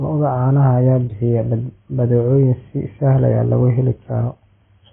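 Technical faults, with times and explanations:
Throughout, AAC compression: the speech is dull and smeared, with nothing above 3.4 kHz and a warbly, fizzy edge on sibilants. The likely cause is heavy AAC-LC encoding consistent with about 16 kbps, which discards the upper bands and coarsely quantises the rest.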